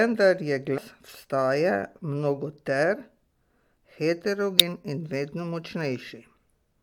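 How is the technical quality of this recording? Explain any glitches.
One glitch stands out in the speech, damaged data in a compressed stream, from 4.58 to 4.88 s. Corrupted bytes in the encoded stream there made the decoder misread those frames and lose sync until it found a valid frame header again, producing a roughly 0.3 s disruption.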